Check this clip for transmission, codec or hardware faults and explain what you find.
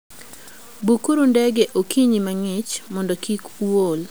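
One fault runs through the whole speech clip.

Low bit depth without dither, throughout: the speech sounds grainy, with distortion that tracks its level and grows harsher as syllables fade. The likely cause is truncation to about 7 bits without dither, leaving rounding error around 30 dB below the signal.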